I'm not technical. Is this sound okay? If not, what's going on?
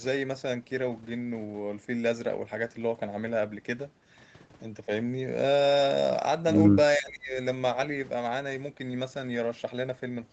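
No. Speech suppressed in double talk, from 6.98 to 7.37 s: for a bit under half a second the speech drops sharply, becoming much quieter. The likely cause is that both sides of the call talked at the same moment. The echo canceller, which stops the other person's voice from bouncing back through the speaker, couldn't tell the two voices apart, so it turned this speaker down along with the echo.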